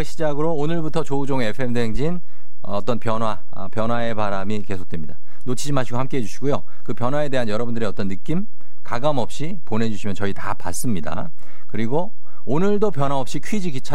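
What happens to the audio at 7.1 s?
DC offset is present at 7.1 s, as throughout the clip: the speech waveform sits shifted off zero by a constant of about -12 dBFS, inaudible but eating headroom.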